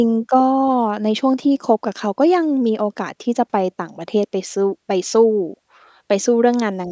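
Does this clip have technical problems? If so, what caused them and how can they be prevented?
No, nothing in this speech stood out as a technical problem on listening, so there is no cause to trace and nothing to prevent.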